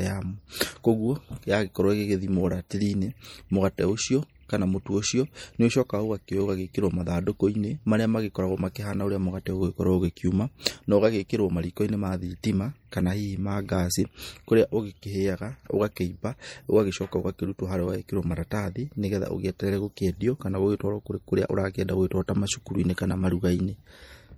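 Speech recording carrying plainly audible coding damage from start to finish, likely from MP3 compression at a low bitrate, which fits an encode around 48 kbps. At that rate the encoder cannot fund every frequency line, so weaker components get zeroed and reappear from frame to frame, giving the speech an unstable, smeared texture. The spectrum runs up to 21.6 kHz with nothing above it, consistent with the encoder's fixed upper limit.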